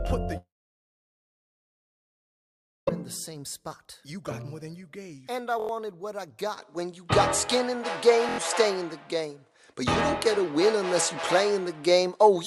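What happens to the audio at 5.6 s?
A repeated buffer occurs from 5.60 to 5.69 s. New audio failed to arrive in time, so the playback device replayed its last block of about 23 ms, which fits a 1024-sample buffer, four more times, so the same fragment sounds five times in a row, each with a hard join. Repeating at roughly 43 times per second, it is heard as a short stutter, and about a tenth of a second of the original audio is lost.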